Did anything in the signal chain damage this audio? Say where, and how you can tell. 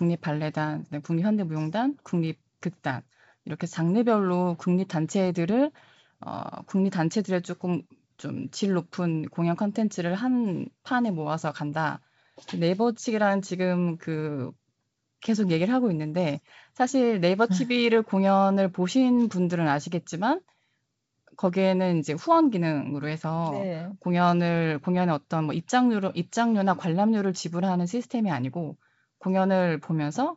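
No, nothing in the chain has damaged this speech. It comes through a G.722 wideband telephone path at 64 kbit/s, which keeps the voice band up to about 7 kHz, and any trace the coding leaves is faint at most.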